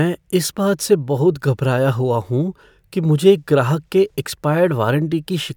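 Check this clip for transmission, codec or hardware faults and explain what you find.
No transmission, codec or hardware faults can be heard anywhere in this speech recording. Nothing in the audio calls for further explanation.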